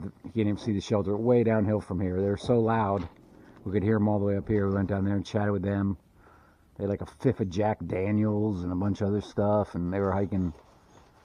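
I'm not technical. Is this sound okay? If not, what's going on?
Yes, nothing wrong here.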